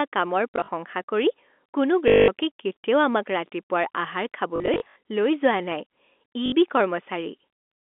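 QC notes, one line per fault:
0.53–0.68 s, 2.08–2.28 s, 4.56–4.96 s, 6.46–6.52 s: packet loss with last packet repeated. The receiver lost stretches of about 100, 200, 220 and 60 ms of speech and filled each gap by replaying the last packet. The first and third losses are scattered in short runs of up to 40 and 60 ms. The loss pattern fits 20 ms packets, so longer runs buzz at about 50 Hz as a robotic stutter.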